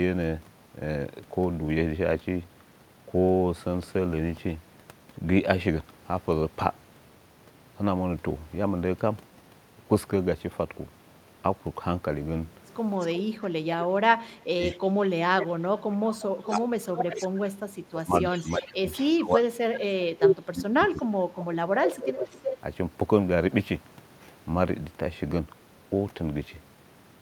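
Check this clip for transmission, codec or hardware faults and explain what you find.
Two faults are present, both between 13 and 23 seconds, and both probably come from echo cancellation on a speakerphone.

Echo leak occurs at 13.0–13.16 s, 14.61–17.51 s, 18.3–20.36 s and 20.95–22.57 s. A delayed copy of the speech arrives about 0.34 to 0.36 s after the original, with the delay creeping upward from 338 ms to 361 ms. The likely cause is a far-end loudspeaker whose output reached its microphone and was only partly cancelled. The first burst is faint. Later ones grow loud, with one roughly level with or above the direct speech.

Speech suppressed in double talk hits at 13.16–15.4 s, 16.06–16.83 s, 17.61–19.56 s and 20.37–21.8 s, interleaved with the echo stretches. The speech dips sharply, in places by roughly 20 to 30 dB. The likely cause is a canceller that could not separate local speech from the returning echo while both were active and attenuated everything. 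The longest losses are around 1.5 to 2 seconds of the affected spans.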